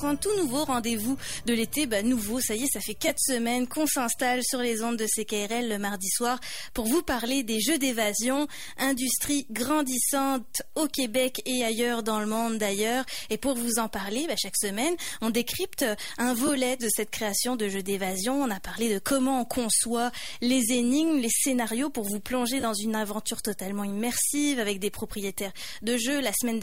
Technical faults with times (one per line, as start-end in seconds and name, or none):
3.08-3.10 lost LE Audio frames
16.47 lost LE Audio frames
22.60-22.64 lost LE Audio frames